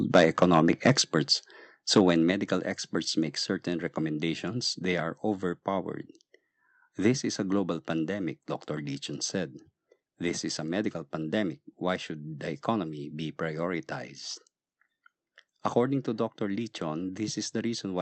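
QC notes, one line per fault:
0.15–0.92 s, microphone overload: peaks run about 7 dB past the converter's limit, likely from excessive input gain, so a couple of percent of samples are flattened. This causes the harsh crackle. The waveform shows squared-off tops, and the spectrogram shows broadband splatter.
1.02 s, microphone volume stepped down: level drops abruptly by about 5 dB right after the distorted stretch, likely an automatic input-gain cut. The waveform envelope steps down at once, and the spectrogram darkens evenly across all frequencies, including the background.
1.96–2.10 s, microphone overload: a shorter burst running about 5 dB over, with a few percent of samples clipped, likely from input gain still set too high. It crackles on the peaks and shows flat-topped waveform peaks with vertical smearing in the spectrogram.
2.31 s, microphone volume stepped down: another sudden drop of about 4 dB just before "experts make certain recommendations", likely a second automatic gain reduction. 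The waveform envelope steps down, and the spectrogram dims uniformly, background included.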